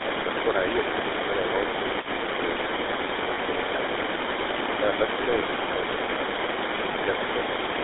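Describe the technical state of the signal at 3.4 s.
Lost GSM frames cover 3.34 to 3.39 s, about 40 ms, which fits two dropped 20 ms frames. The decoder repeated the last good frame's vocal-tract and excitation settings, so the speech briefly hangs on a rough, metallic ring instead of cutting out.

The GSM full-rate codec is active at this point too. The speech is rebuilt from a vocal-tract model excited by sparse, regularly spaced pulses, giving a buzzy, gravelly texture, consistent with the 13 kbps full-rate coder. The band runs from 300 Hz to 3.7 kHz, and the codec damage is plainly audible.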